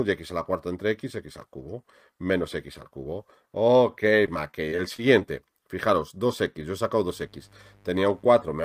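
From 4.26 to 5.24 s the audio turns choppy and robotic: repeated packet loss. Within this second a string of brief holes appears, none longer than about 20 ms. Each one is patched by extending the sound that came just before it, and that repeated material takes up roughly an eighth of the stretch. A single dropout would be one click or gap. Here the holes come in close succession, and that closeness produces the mechanical, stuttering texture.

From 7.04 to 8.54 s a mains buzz sits under the sound at about 30 dB below it. The fundamental is 50 Hz, but sharp switching spikes twice per cycle, typical of a dimmer, a rectifier or a missing shield, spread energy up into a ladder of harmonics reaching the kilohertz range. That gives a steady, raspy edge. A plain hum would be a smooth, low 50 Hz tone without that rasp.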